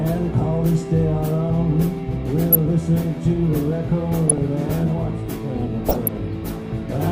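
DAB burbling appears three times, at 2.51 to 2.55 s, 4.28 to 4.38 s and 5.88 to 6.08 s, each burst longer and rougher than the last. Weak reception lets a few bit errors in every thousand slip past error correction into the MP2 stream. Corrupted samples put short blips of noise in single sub-bands, and corrupted scale factors throw sub-bands up or down in level for up to a frame, producing short noise blips over the sound.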